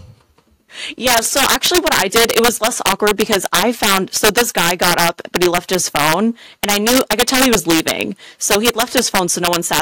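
Integer overflow runs throughout the speech, from start to finish. Wherever the signal is driven about 5 dB past full scale, the peaks that exceed the integer ceiling wrap around to the opposite extreme instead of being held at the limit. Only a small share of samples, around one and a half percent, cross that line, but each one leaps across the whole range, producing harsh, violent cracks on the loudest moments, far sharper than ordinary clipping.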